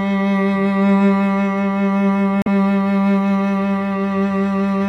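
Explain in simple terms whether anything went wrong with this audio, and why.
At about 2.42 to 2.48 s the music breaks into a brief blip lasting roughly 0.06 s. This is damaged data in a compressed stream: a small stretch of the file was corrupted, so the decoder misread those frames and had to resynchronise before playback continued.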